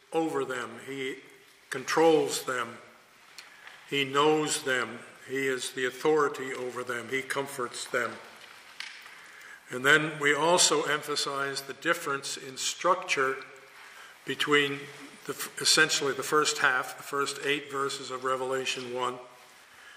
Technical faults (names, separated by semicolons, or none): none